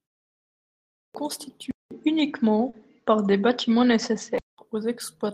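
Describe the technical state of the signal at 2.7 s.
At 2.69 to 2.75 s there is short concealed packet loss. About 40 ms of speech arrived too late for the decoder. The receiver extended the preceding sound to cover the gap, then blended back into the real signal. It is heard as a brief smear or wobble.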